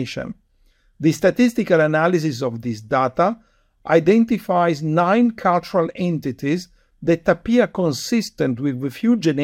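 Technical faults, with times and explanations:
No technical faults can be heard in this speech.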